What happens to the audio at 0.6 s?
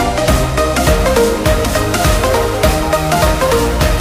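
Nothing goes wrong at 0.6 s: the audio plays through that moment intact, with no dropout, click, glitch or other fault.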